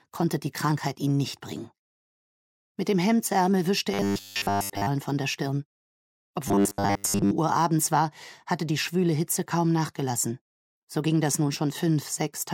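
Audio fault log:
3.94–4.89 s and 6.48–7.31 s, robotic sound from repeated short buffers: the sound collapses into a rigid, metallic buzz at 100 Hz. This is likely from short stretches being replayed in place of missing audio, which fits a 10 ms buffer repeating, with most of the real material skipped.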